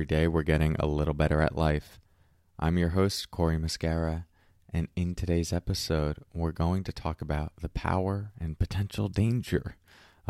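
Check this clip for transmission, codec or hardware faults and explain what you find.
One hardware fault is present. From 6.08 s to 10.08 s, right after "and in today's", regular ticks sound every 0.5 s, about ten in all. These are periodic USB or driver dropouts: something blocks the audio path on a fixed schedule, skipping a tiny fraction of a millisecond of the speech each time.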